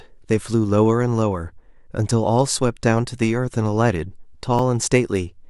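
At 4.59 s the speech jumps forward with no gap of silence. The likely cause is a dropped buffer (overrun): samples were overwritten before being read, losing roughly 5 ms and butting the two sides together.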